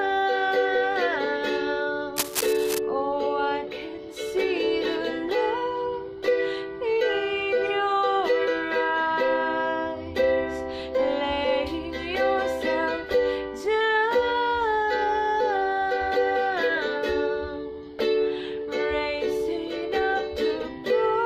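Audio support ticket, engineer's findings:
Cable scratch noise, 2.16–2.78 s: dense, uneven rustling bursts nearly as loud as the signal. Likely a worn cable or connector moved, with contact resistance fluctuating rapidly.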